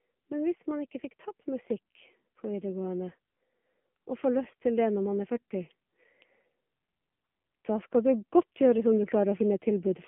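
Throughout, the speech carries AMR narrowband mobile codec damage. Energy sits only between 150 Hz and 3.4 kHz, so a spectrogram is blank above that band. The buzzy, synthetic texture fits a low rate such as 7.4 kbps.

From 7.65 to 9.95 s, automatic gain rises by about 4 dB. The control judged the input too quiet, so the voice and background swell together, and the waveform envelope widens gradually.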